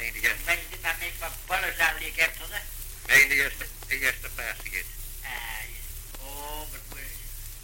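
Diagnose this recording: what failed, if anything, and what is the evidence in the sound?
Nothing stood out on listening that would point to a failure at any stage of the chain.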